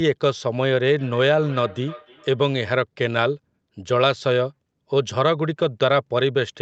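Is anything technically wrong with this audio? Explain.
Yes. From 0.98 to 2.73 s there is feedback echo between two devices. A second device plays back this microphone's sound and the microphone picks it up again, which its echo canceller cannot remove. The speech returns roughly every 0.3 s at about 20 dB below the direct sound. On a spectrogram this shows as faint repeated copies trailing each syllable, with nothing above 8 kHz from the call microphone processing.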